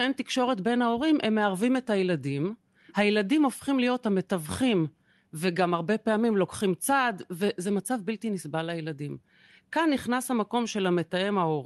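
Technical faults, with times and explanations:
None found: the speech has no audible technical faults.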